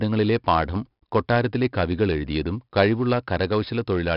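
A gritty hiss tracks every loud syllable throughout, with nothing above 5.3 kHz. This is heavy 4-bit ADPCM compression, whose coarse predicted steps leave level-following noise, fitting roughly 44 kbps.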